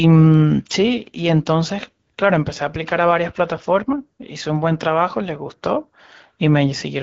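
No technical faults can be heard in this speech.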